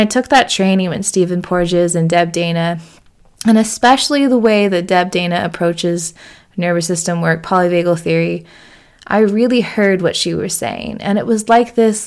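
Nothing in this speech recording points to a technical fault. There is no event to place on the timeline.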